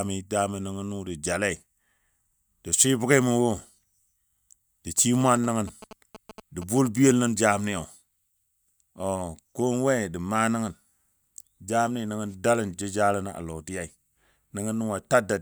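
Speech, and from about 4.98 to 7.11 s there's a galloping dit-dit-dit of short buzzes at roughly 217 Hz, sitting around 15 dB under the voice. That's GSM signalling bursts: a nearby 2G phone pinging the network, its radio pulses rectified by the audio circuitry.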